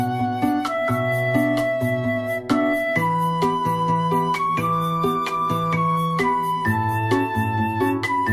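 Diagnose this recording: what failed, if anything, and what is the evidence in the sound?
Nothing failed; no fault is audible anywhere.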